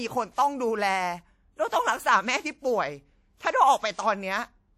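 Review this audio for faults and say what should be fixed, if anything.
Codec damage is plainly audible throughout the speech. It rings and smears, with a washy hiss that swells and fades with the signal. The likely cause is WMA compression at a bitrate around 48 kbps. Long transform blocks spread noise across tens of milliseconds, and weak detail is dropped. To prevent it, export from an uncompressed master or use a modern codec at a higher bitrate.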